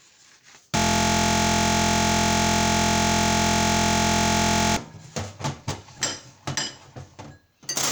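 From 0.77 s to 4.77 s the sound locks into a system hang loop: the machine or its driver stalled while the audio hardware kept replaying the same ring buffer. A 23.22 ms slice, consistent with a 1024-sample buffer, repeats identically well over a hundred times, producing a steady buzz at 43.1 Hz. Unlike dropouts or jitter stutter, nothing is missing or uneven; the identical repeats fuse into one fixed, pitched drone.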